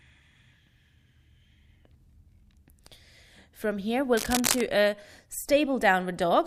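A speech clip with a burst of cable scratch noise from 4.17 to 4.61 s: a dense, ragged scratching and rustling laid over the speech, only a little quieter than it. The likely cause is a worn cable or connector being moved, its contact resistance fluctuating rapidly.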